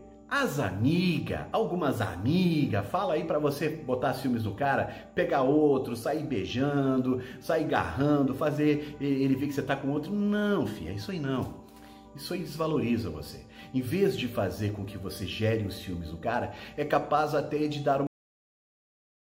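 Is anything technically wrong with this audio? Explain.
Yes. At 18.07 s the sound stops abruptly in the middle of itself, dropping straight to digital silence with no natural decay, and stays silent for the last 1.3 seconds. This is a cut-off end: the final buffers were never written or played back.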